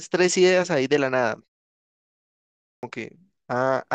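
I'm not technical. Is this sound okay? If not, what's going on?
No. At 2.35 s there is a clipped start after a pause: after almost a second of silence, the playback device wakes too slowly, so about half a second of speech is swallowed until 2.83 s. Muted pauses would only quiet the gaps, but here actual speech is lost.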